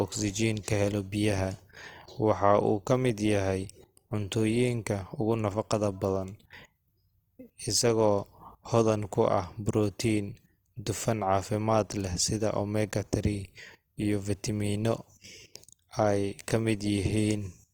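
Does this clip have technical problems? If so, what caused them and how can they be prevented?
Yes. Across the whole speech clip there's a grainy, rough texture on the voice, and that's plainly audible. It's likely Opus compression in its music (CELT) mode: when the encoder runs short of bits it fills thin bands with folded or noisy content instead of leaving gaps, so you hear grit rather than swirl. The top end still reaches about 20.4 kHz, which fits a fullband stream at around 24 kbps. To prevent it, encode at a higher bitrate.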